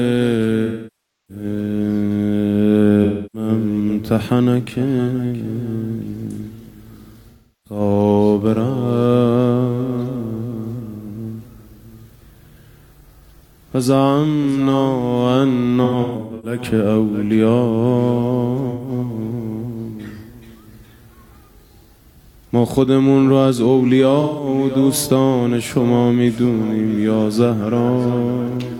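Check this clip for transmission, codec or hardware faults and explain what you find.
AAC frame loss with concealment occurs six times: 0.65–1.44 s, 3.04–3.49 s, 7.30–7.80 s, 15.84–16.59 s, 18.69–18.89 s and 24.20–24.48 s. At each point the decoder stopped receiving AAC frames and improvised from the last intact spectrum. Gaps run from 128 ms to 640 ms. The 15.84 s event is broken into short holes of up to about 150 ms, heard as brief smeared, noisy, phasey patches where detail is lost.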